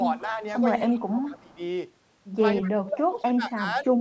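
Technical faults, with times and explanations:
0.0–0.43 s, 0.91–1.61 s and 2.62–3.86 s: speech suppressed in double talk. The speech dips, by about 10, 20, then 35 dB, likely because the echo canceller mistook overlapping talk for echo and attenuated it.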